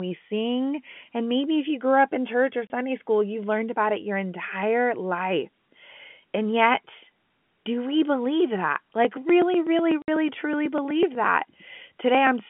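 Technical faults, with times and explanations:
2.67 to 2.70 s, packet loss filled with silence: right after "up in church or" and before "school you've learned about", the sound drops into a 30 ms hole with hard edges. The length fits a single lost packet, and the receiver filled the gap with silence.
10.02 to 10.08 s, packet loss filled with silence: a 60 ms gap with the same hard edges, twice the first hole, which points to two consecutive lost packets.
8.92 to 12.40 s, periodic USB or driver dropouts: starting after "do we believe that", there is a steady train of small ticks every 0.124 s, around thirty in all, heard only while sound is present. Each one marks roughly a millisecond of audio that was skipped when a recurring background task stalled the USB bus or audio driver. Stretches of audio simply go missing, so each splice lands as a tiny discontinuity. The 150 Hz to 3.4 kHz telephone band of the G.711 line can be heard through all of this.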